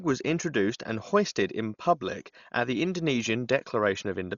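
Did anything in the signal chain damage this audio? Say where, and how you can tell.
Yes, at the codec stage: throughout, the speech is dull, with nothing above 7 kHz and rough, fluttering noise, likely heavy Dolby Digital compression near 40 kbps filling unfunded bands with dither.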